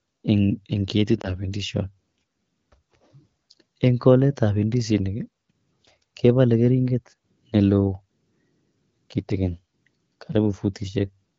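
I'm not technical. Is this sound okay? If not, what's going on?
No. Around 1.21 to 1.32 seconds, a radio error corrupted a small piece of the phone call's speech data, which fits a single lost frame. This is called lost AMR speech frames. The HD Voice decoder filled the gap by reusing the last good piece of speech and turning it down. You hear a brief dip or warble in the speech, about a tenth of a second long, before it carries on in the clear HD Voice quality heard across the clip.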